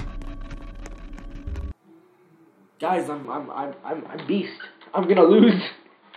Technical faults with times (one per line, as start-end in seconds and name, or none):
3.25-6.17 input switched to a poorer device